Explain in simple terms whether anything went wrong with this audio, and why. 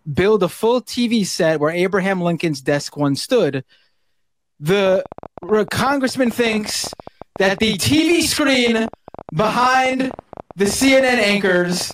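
From 4.87 s to the end at 11.92 s, a train of clicks ticks about 12.9 times a second, unevenly, roughly a hundred alike pops, likely outside interference.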